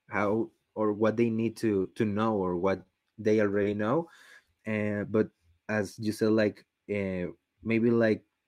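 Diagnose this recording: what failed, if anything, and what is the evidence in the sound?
Scattered short gaps run from 1.33 to 2.87 s, a network-stage fault. About seven packets in this stretch arrived late or not at all, each gap no longer than roughly 20 ms, and the receiver patched every hole by extending the preceding sound. Together the patches cover around a tenth of a second, some 7 percent of the span, heard as isolated ticks and small hiccups scattered through the speech.

Short concealed packet loss occurs at 3.63 to 3.67 s, again on the network side. A single 20 ms chunk of the call missed the decoder's deadline, so the receiver synthesised a 20 ms replacement, continuing the pitch of voiced sound or shaping noise for unvoiced sound, then cross-faded back into the real signal. The result is one brief smear or wobble.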